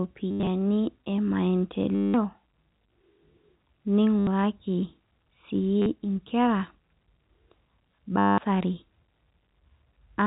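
Packet loss with the last packet repeated shows up five times in this speech: 0.31 to 0.47 s (scattered, longest run 90 ms), 1.95 to 2.14 s, 4.19 to 4.27 s, 5.82 to 5.86 s and 8.19 to 8.38 s. Each time the receiver kept replaying its last good chunk until fresh audio arrived. The loops rarely line up with the pitch, and the longer runs buzz at about 100 Hz, which fits 10 ms packets. It comes across as a brief robotic stutter over the narrow telephone-band sound.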